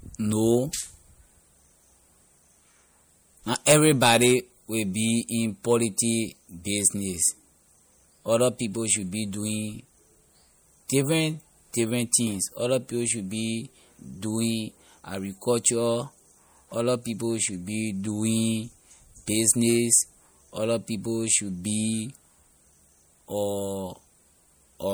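Throughout, the speech sounds plainly watery and swirly, with smeared attacks, likely from MP3 compression switching weak frequency lines on and off, which fits a 64 kbps encode.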